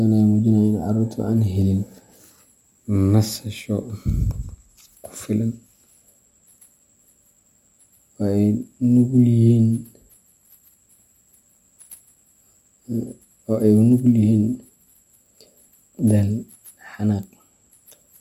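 Throughout, sample clock jitter mistimes samples, adding hiss about 40 dB down that, unlike steady noise, rises with loud, bright speech and vanishes in pauses.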